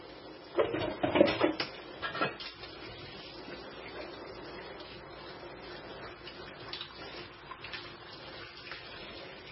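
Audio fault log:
Throughout: MP3 compression, likely; nothing above 5.6 kHz, and heavy swirling, watery artefacts fit a starved bitrate of about 16 kbps zeroing weak frequency lines.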